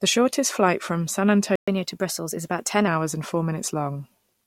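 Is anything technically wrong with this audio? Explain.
Yes, the speech is interrupted by a playback stall and then a catch-up at higher speed.

At 1.56 s the output cuts out for 120 ms and resumes at 1.68 s. This is a playback stall, likely because the player ran short of buffered data or its audio thread was briefly blocked. The speech halts abruptly mid-flow. On the waveform it appears as a flat line where the signal abruptly drops to silence and then resumes. A spectrogram shows a clean vertical blank band across all frequencies.

From 1.68 s to 2.88 s the player works off its backlog by resampling at 1.1 times normal speed, starting on "hours and four". Speeding up this way also raises pitch, here by about a semitone and a half, so the speech sounds hurried and slightly higher. On a spectrogram the harmonics shift upward and spread apart during that span. The waveform's syllable envelopes look compressed in time.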